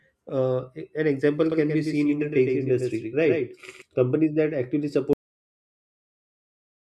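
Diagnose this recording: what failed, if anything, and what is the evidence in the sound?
From 1.52 s to 3.82 s the speech is shadowed by a second, flat copy trailing roughly a tenth of a second behind and about 5 dB quieter, with no room colour and abrupt edges. This doubled audio track likely comes from a second, slower capture path mixed back in.

At 5.13 s the speech is chopped off mid-sound and falls straight into digital silence with no decay, staying silent to the end. This cut-off end points to the final buffers never being written at the storage stage, so the recording simply stops.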